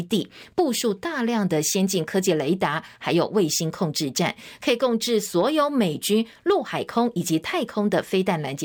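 Nothing goes wrong anywhere in this recording of speech; there's no technical fault to point to at any moment.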